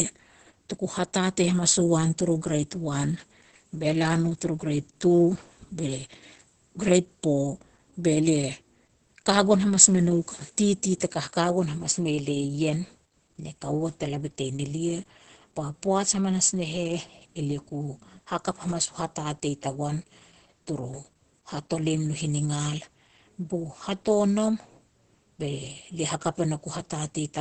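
Speech, with heavy Opus voice compression throughout. The band stops at about 8.7 kHz, the wideband ceiling for the SILK linear-prediction coder, so sibilants and consonant detail are dulled. The excitation is coded coarsely enough that the voice sounds muffled, hoarse and slightly robotic. That degree of damage in SILK mode fits a low setting of around 10 kbps, with the artefacts pacing consistent with 20 ms frames.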